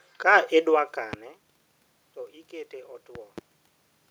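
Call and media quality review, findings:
Loud pop at 1.13–1.16 s, double pop at 3.15–3.41 s, around 20 dB above the speech. Likely a voltage step from a plug, switch or static. Speech continues underneath, unlike a dropout.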